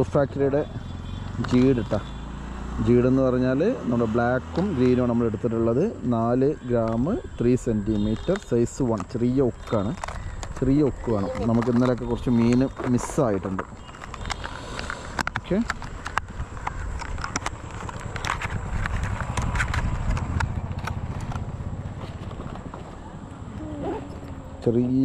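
At 6.82 s a single sharp click is heard, likely from dropped samples: about one sample goes missing, so the waveform jumps abruptly to a later value. On a spectrogram it shows as a thin vertical line spanning the full frequency range.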